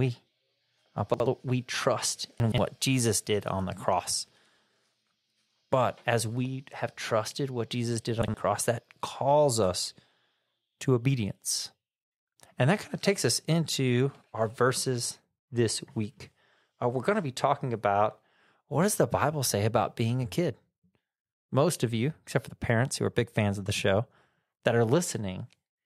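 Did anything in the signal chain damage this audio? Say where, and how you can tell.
Yes. Chunks out of order at the buffer stage: at 1.14, 2.4 and 8.22 s, 60 ms blocks play one or two slots late, causing jumbled speech and hard joins.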